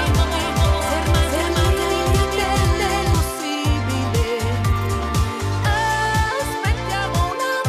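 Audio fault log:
0.00–3.14 s, doubled audio track: a second full-band copy of the sound is already running when the clip begins. It trails the original by around 400 ms at roughly the same level, so each event is heard twice in quick succession, like a flat slapback with no decay or room colour. The copy cuts out abruptly at 3.14 s. The likely cause is the signal being captured again through a slower path, or an edit leaving two out-of-step copies layered together.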